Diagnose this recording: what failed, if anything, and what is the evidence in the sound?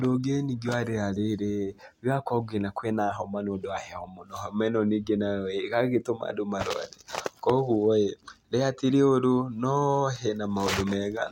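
Nothing failed; no faults heard.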